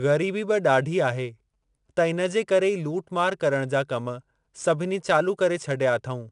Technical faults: 4-bit ADPCM compression

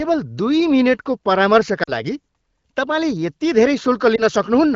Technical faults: lost AMR speech frames; block of digital silence

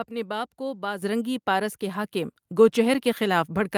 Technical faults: microphone volume stepped up

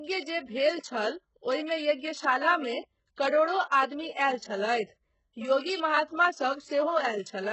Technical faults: HE-AAC compression; pre-echo

